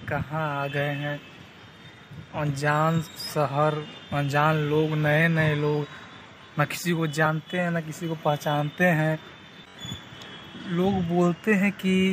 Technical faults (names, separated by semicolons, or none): compressed frames skipped